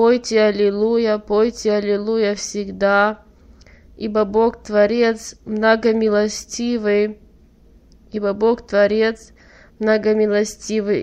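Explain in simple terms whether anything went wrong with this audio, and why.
Nothing went wrong here: no faults are audible anywhere in the recording.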